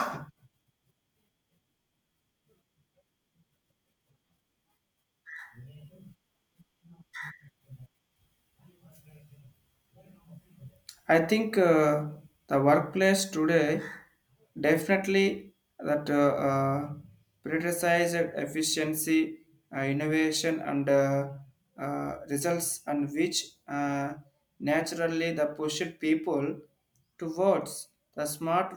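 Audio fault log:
No technical faults can be heard anywhere in the speech signal.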